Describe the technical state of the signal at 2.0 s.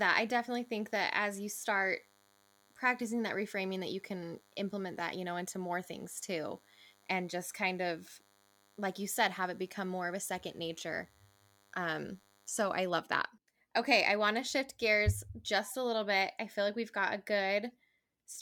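DECT cordless phone buzz runs from the start to 12.9 s, ending just before "that okay i want". A nearby DECT handset or base sends a radio burst 100 times a second, and the audio circuit rectifies it into a thin, harmonic-rich 100 Hz buzz, faint and well below the speech.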